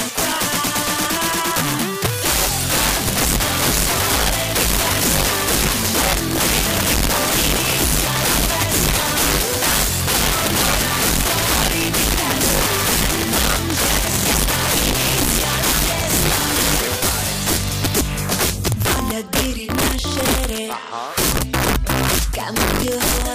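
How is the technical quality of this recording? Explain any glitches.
The recording is marred by one serious fault running through the whole clip. Integer overflow, throughout: the signal is pushed about 5 dB past full scale, and instead of being limited, the loudest peaks, somewhere under a tenth of the samples, wrap around to the opposite extreme. Each wrap produces a harsh, violent crack on loud passages, far sharper than ordinary clipping.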